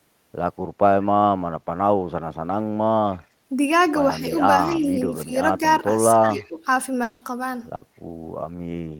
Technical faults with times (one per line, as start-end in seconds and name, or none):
4.19-4.34 speech suppressed in double talk
4.66-4.87 speech suppressed in double talk
5.25-5.31 speech suppressed in double talk
6.13-6.60 speech suppressed in double talk
6.36-6.50 echo leak
7.03-7.24 long network dropout
7.75-7.84 burst of packet loss